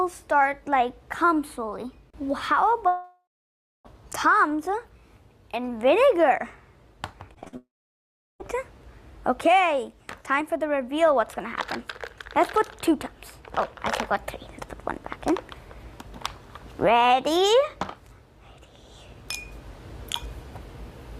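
Audio stream, with two long gaps at 2.87 to 3.87 s and 7.57 to 8.42 s, likely a long network dropout: the last sound is stretched into a fading buzz, then silence for about 0.6 s and 0.7 s, resuming with that stretch missing. Just before the second gap, from 7.35 to 7.55 s, repeated packet loss opens four short holes, the longest 48 ms. Patching them conceals half that span and gives a choppy sound with pieces missing.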